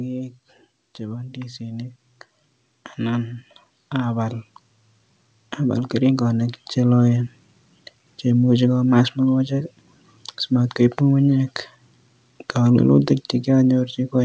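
Automatic gain rising runs from 0.97 to 7.08 s in this speech recording. The gain control judged the input too quiet and raised its gain slowly, by about 12 dB, so the voice and the background noise swell together over those six seconds. The audio carries nothing above 8 kHz, which fits a wideband call codec such as G.722.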